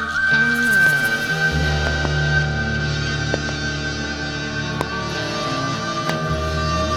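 Loud pops hit the music as double pops at 0.87–0.95 s, 1.87–2.07 s and 3.34–3.51 s, then single pops at 4.81–4.83 s and 6.10–6.12 s. Each peaks about 15 dB above the music, which continues underneath. A sudden voltage spike from a switch, plug or static is the likely cause.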